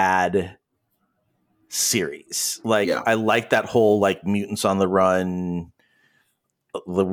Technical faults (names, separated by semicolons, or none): sample clock jitter